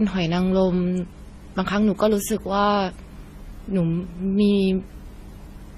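Throughout, smeary, swirly artefacts pile up, likely from transcoding between lossy codecs (MP3, Vorbis, then AAC-LC); a spectrogram shows nothing above 14 kHz.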